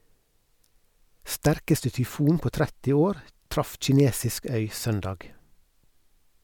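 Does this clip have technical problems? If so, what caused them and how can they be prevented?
No, this clip has no technical problems, so there is nothing to prevent.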